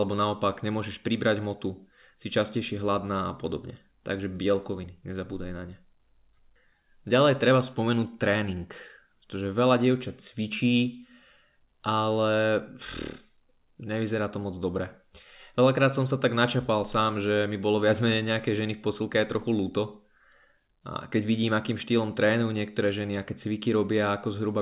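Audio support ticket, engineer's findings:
Signal intact with no dropouts, clipping or timing disturbances found; speech is band-limited to 4 kHz with nothing above, consistent with a G.711 A-law call path operating as expected.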